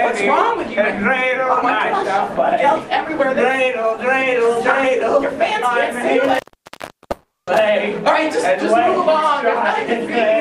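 At 6.24 s an intermittent contact sets in and lasts to 7.62 s. A loose plug or cable opens and closes. The sound drops out with crackle at each edge. The line stays open for about 0.72 s in total, leaving faint hiss.

From 7.11 s to 7.49 s there is a call audio freeze. The last sound is stretched into a fading buzz or hiss, then about 0.23 s of silence. Held-up packets likely emptied the jitter buffer. Playback resumes where it stopped, now 0.36 s late, with nothing lost.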